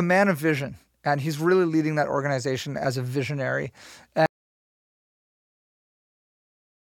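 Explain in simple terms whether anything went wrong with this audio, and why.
Yes, something went wrong: there is an audio dropout to silence starting at about 4.26 s and lasting right to the end of the clip. The speech stops abruptly mid-flow and is replaced by silence, with not even faint background room sound. That points to the input being lost, likely from a disconnected device, a broken link or an accidental mute, while the recording carried on writing empty audio. Anything said after that point is gone.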